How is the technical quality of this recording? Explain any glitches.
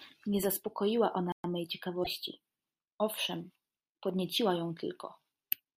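The recording has two distinct glitches, both within the first few seconds of the speech.

From 1.32 to 1.44 s there is a playback stall: the speech stops mid-flow for 120 ms and then carries on. The likely cause is that the player ran out of buffered data or its thread was blocked, so nothing reached the output until it caught up. On a waveform this shows as a flat line with abrupt edges on both sides. On a spectrogram it is a clean vertical gap across all frequencies.

At 2.00 to 2.07 s there is damaged data in a compressed stream. A stretch of the encoded stream is corrupted, so the decoder misreads those frames, loses sync and has to search for the next valid frame header. This produces a short chirp, squawk, click or hole lasting about 70 ms, and the speech may jump slightly ahead afterwards. On a spectrogram this appears as a brief disruption that doesn't match the surrounding harmonics. 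The waveform shows an irregular break there.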